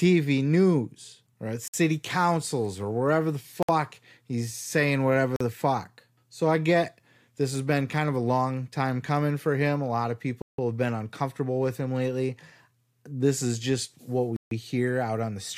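Speech with five brief dropouts to silence, at 1.68, 3.63, 5.36, 10.42 and 14.36 s, lasting 43 to 166 ms. Each is likely a Bluetooth stall as the headphone buffer ran dry.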